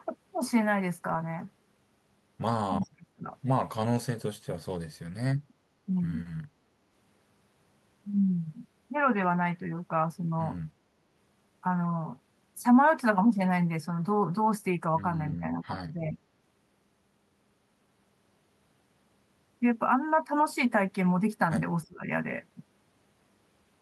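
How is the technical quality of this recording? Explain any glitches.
The recording has three brief dips where the speech is pushed down hard, and the Opus call path carries the audio up to about 12 kHz.

At 2.74–3.29 s, 15.38–16.18 s and 21.85–22.05 s the speech sinks sharply, by around 35 dB in the first dip and about 25 dB in the later two. The likely cause is speech suppressed in double talk: with both sides speaking, the echo canceller couldn't separate the talker from the echo and attenuated both.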